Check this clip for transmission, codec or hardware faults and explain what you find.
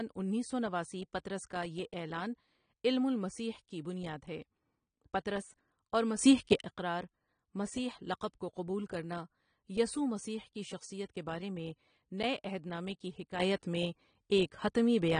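Two kinds of fault are audible: codec damage throughout, and two abrupt level changes.

AAC compression runs through the whole speech clip. Nothing is present above 9.7 kHz, and the damage is plainly audible. This fits AAC-LC at about 32 kbps. The encoder quantises spectral lines against a hearing model and drops the top band at low bitrates, leaving speech dull and smeared.

A sudden gain jump occurs from 6.19 to 6.61 s, just before "اقرار مسیح". The level rises by about 12 dB. A second runs from 13.40 s to the end, just after "عہد نامے کی", about 8 dB up. The likely cause is gain applied without a ramp, so speech and background jump together.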